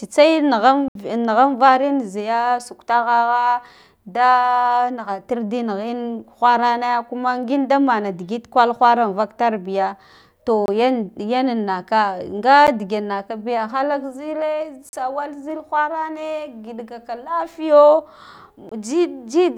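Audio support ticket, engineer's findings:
Speech cuts to dead silence: 0.88–0.95 s (70 ms hole), 10.66–10.68 s, 12.67 s (11 ms tick), 14.89–14.93 s (40 ms), 18.69–18.72 s. Block of digital silence. Output buffer likely not filled in time; the 23 ms gaps fit a 1024-sample buffer.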